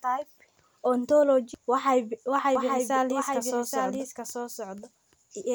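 Speech throughout, and from 2.55 s to the end you get a doubled audio track: a second full-band copy trailing roughly 0.7 s behind, maybe 5 dB down, cutting in abruptly with no room colour. Likely a slower second capture path or a misaligned edit.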